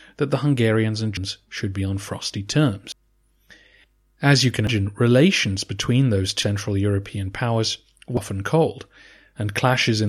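At 1.17, 2.92, 4.67, 6.42 and 8.17 s the speech jumps ahead, losing about a third of a second each time, with no gap left behind. That steady spacing points to audio missing between chunks, likely dropped as a recorder handed over between 2-second blocks.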